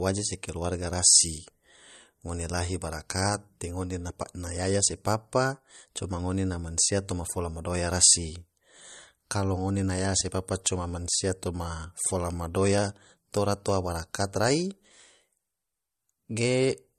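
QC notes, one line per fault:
Throughout: low-bitrate audio saved at a high bitrate. The speech stops dead at 13.2 kHz and keeps that thin, lossy coding texture, which fits a 48 kbit/s MP3 likely re-saved at 192 kbit/s. The bigger file can't restore what the first pass discarded.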